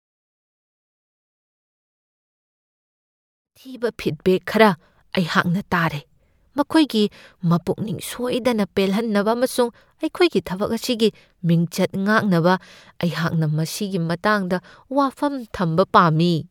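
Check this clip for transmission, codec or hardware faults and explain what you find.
No transmission, codec or hardware faults can be heard in the speech. The level rises in a smooth fade-in from roughly three and a half seconds to 4.38 s, an ordinary edit with no click or hard edge.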